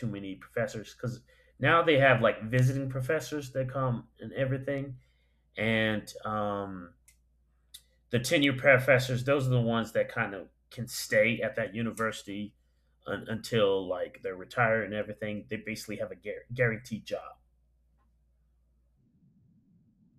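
A speech recording carries a steady train of sharp ticks of uneven strength, roughly every 0.7 s from 0.40 s to 20.14 s, about thirty in all. These are word clock ticks: the receiving device on the digital link runs on its own clock rather than locking to the sender's. With the two drifting apart by something like 30 ppm, each time they slip past each other a single sample is dropped or repeated, leaving a brief click.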